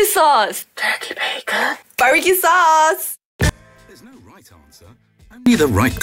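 From 3.49 s to 5.46 s, the sound drops by about 30 dB and turns faint. This points to one channel inverted. One stereo channel likely has reversed polarity, so the shared content cancels when the channels are summed to mono.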